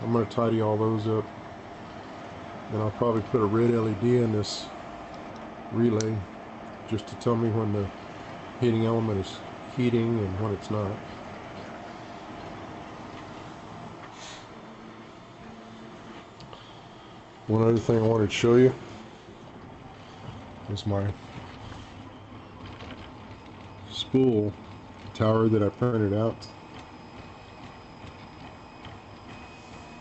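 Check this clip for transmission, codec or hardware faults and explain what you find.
Two jitter-buffer faults show up near the end, over a call path limited to about 8 kHz bandwidth, which fits Opus at around 32 kbps.

From 25.83 to 25.94 s there is a short stall from a late packet. A packet arrived late and the buffer ran dry, so the last sound was stretched for 89 ms and the audio then resumed exactly where it stopped. Unlike loss concealment, nothing is skipped. The sound is only held, with a slight buzz or dip, and the delay grows by 89 ms.

From 27.88 to 28.49 s comes a jitter buffer speed-up. To work off the delay, the receiver cut short pitch-period pieces again and again, removing about a tenth of a second. Playback runs at 114% and sounds hurried, but the pitch stays unchanged, which sets it apart from resampling or clock drift.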